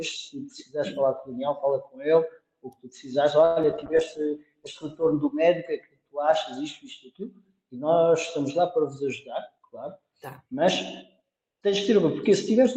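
From 3.45 to 3.84 s there is repeated packet loss, the robotic-sounding kind. Five holes open up in under half a second. Each is patched by stretching the last sound forward. The longest gap runs 109 ms. About 147 ms is filled this way, and 80 ms is simply missing. Concealment covers 38% of the span. The result is choppy, with pieces dropped between the patches.

At 3.88 s a call bitrate drop begins. The connection's bandwidth estimate fell, so the encoder was pushed from 96 kbps down to 17 kbps. It stays at the bottom for about 1.4 s. At that rate the coding turns coarse and the top end is cut away. The sound goes rough, watery and muffled. It recovers by 5.41 s.

Inside that stretch, from 3.91 to 4.29 s, comes a jitter buffer slow-down. The receiver was short of buffered audio or had just raised its target delay, and needed a reserve. It repeated small pitch-length pieces many times over, adding 46 ms. 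Playback runs at 90% speed while pitch stays put. Sounds are drawn out.

From 9.06 to 10.62 s a jitter buffer speed-up occurs. Too much audio had piled up in the buffer. To trim the delay, the receiver cut short pitch-period slices again and again, removing roughly 70 ms. Playback runs at 104% speed with unchanged pitch.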